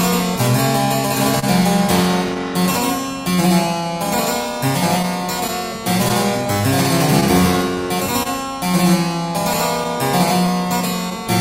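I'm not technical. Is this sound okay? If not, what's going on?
No. At about 1.39 s there is a short stall from a late packet: one piece of sound arrived late, so the player held the last sound for about 30 ms until it came. Nothing is lost, just one brief stretched moment, unlike the cluster later.

Between 5.03 and 8.27 s there are scattered short gaps: around seven small holes where pieces went missing, each patched by continuing the previous sound, none longer than roughly 30 ms. You may hear quick ticks or smears grouped in that stretch.

Underneath everything runs clock drift between sender and receiver: the sending device's clock runs about 2 percent slow, so the receiver keeps running slightly short and repeating bits to catch up. These tiny hiccups recur across the whole clip at uneven intervals, not in one spot.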